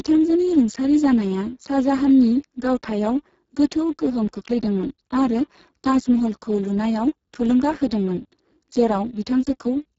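From start to finish the speech sounds rough, hoarse and grainy, with a buzzy, noise-laden quality instead of clean voicing, and its upper range sounds like hiss rather than real detail, with nothing at all above 7.6 kHz. This is heavy Speex codec damage. The degradation points to a very low bitrate, roughly 6 kbps, so the CELP coder has too few bits to model the excitation properly, and the band above 4 kHz is filled with shaped noise.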